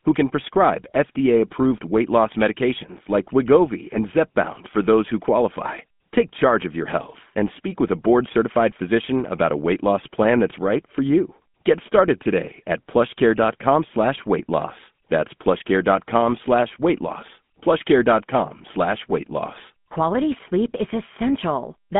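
Speech runs through the GSM full-rate codec for its whole length, narrowed to roughly 150 Hz to 3.4 kHz, with nothing above 3.7 kHz and a plainly buzzy, gravelly texture, which fits a 13 kbps stream.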